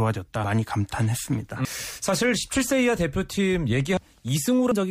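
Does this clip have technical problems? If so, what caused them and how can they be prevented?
Yes. The speech clip has compressed frames skipped at 0.44 s, 3.97 s and 4.72 s. Each time, playback jumps ahead by roughly 0.7 s, which points to about ten frames of around 93 ms each that never reached the output, either missing from the file or rejected by the decoder as damaged. To prevent it, check the file's integrity after transfer or storage, and re-encode from the original source if frames are corrupt.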